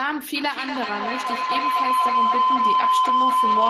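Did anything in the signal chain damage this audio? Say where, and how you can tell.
Yes. A feedback howl enters at the call-processing stage from 0.36 s to the end: an acoustic loop between two devices gains on every pass, narrowing to a tone around 1 kHz that pulses roughly every fifth of a second and peaks about 7 dB above speech. A spectrogram shows a bright, throbbing horizontal band.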